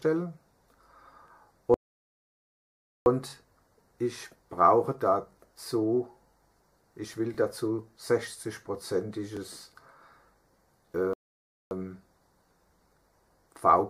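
A brief stutter or click recurs every two seconds, at 1.28–1.30, 3.30–3.32, 5.32–5.35, 7.35–7.37, 9.37–9.39 and 13.41–13.43 s. These are overlapping chunks: the audio was handled in 2.0 s blocks, and each block begins 21.33 ms before the previous one ends, so that sliver plays twice at every join.

Between 1.74 and 3.06 s the sound drops to silence and then picks up exactly where it stopped, and it happens again from 11.13 to 11.71 s. These are rebuffering stalls, where the player ran dry and waited for more data. Nothing is lost, but they add 1.32 s and 0.56 s respectively.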